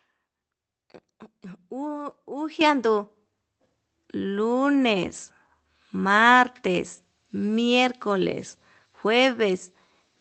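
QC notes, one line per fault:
2.61 s and 3.63 s, microphone volume stepped up: the speech and the room noise behind it jump together, about 8 dB at the first step and about 3 dB at the second. The call software heard a quiet mic and raised the input volume in one go. The gain moves in a single step, with no fade. The call path itself tops out near 8 kHz, which fits Opus at a modest bitrate.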